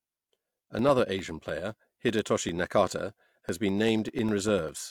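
Periodic USB or driver dropouts, 0.09 to 4.79 s: every 0.1 s a blocked audio path silences roughly a millisecond, heard as regular ticks.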